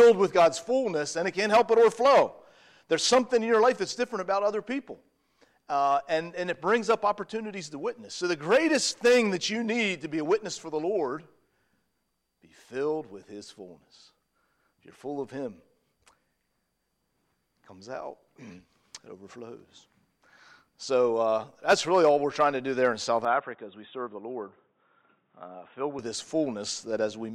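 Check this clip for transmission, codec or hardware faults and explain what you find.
One fault: from 23.25 to 25.99 s the sound turns dull and boxy, with nothing above 3.8 kHz, drops a few dB in level, and picks up a faint new noise floor, all without a gap. This is likely an input switched to a poorer device, whose narrower band and different gain explain the change.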